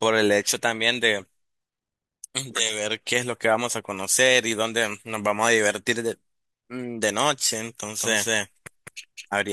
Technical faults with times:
7.99-9.53 doubled audio track

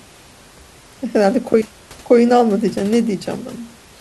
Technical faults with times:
none

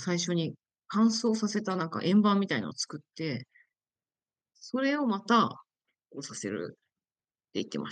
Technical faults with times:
none

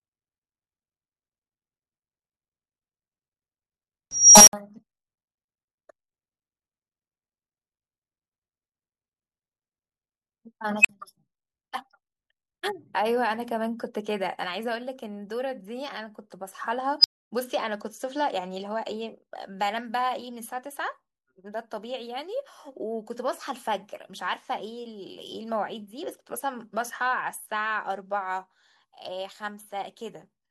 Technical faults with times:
4.11-4.53 unstable filter
10.80-10.89 unstable filter
17.00-17.31 unstable filter

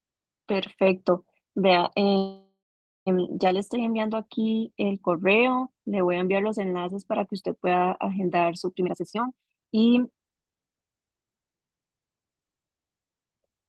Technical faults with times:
2.17-3.08 call audio freeze
8.80-10.71 jitter buffer speed-up

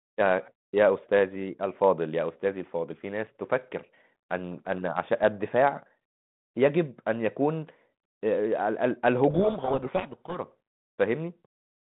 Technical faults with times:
9.30-10.39 codec payload misread

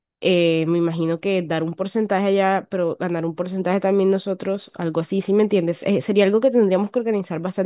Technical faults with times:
none

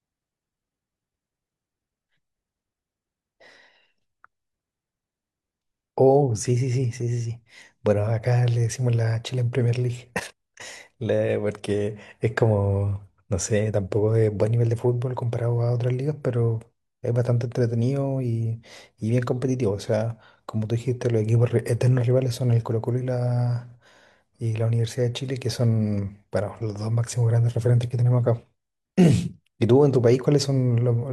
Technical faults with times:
none

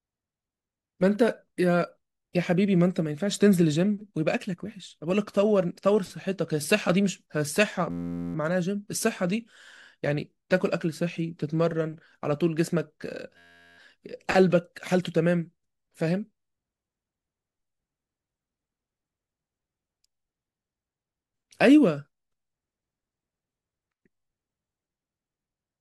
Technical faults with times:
7.91-8.35 system hang loop
13.37-13.78 system hang loop

